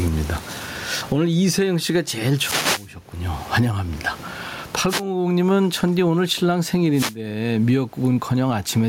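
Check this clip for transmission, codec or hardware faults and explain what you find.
Two faults are audible in this speech recording: gain pumping throughout, and three wireless microphone noise hits.

Gain pumping: The cause is likely input gain set far too high, with a fast limiter clamping down on every loud syllable. The gain swings by around 25 dB, leaving the speech squashed and flat in level.

Wireless microphone noise hits: At 2.35–2.92 s, 4.87–5.04 s and 6.93–7.17 s, the FM radio link fades as reflected signals cancel, and receiver noise rises. Each fade is heard as a brief swish or burst of static over the speech, the first one longest.

The room noise, about 37 dB below the speech, is part of the recording rather than a system fault.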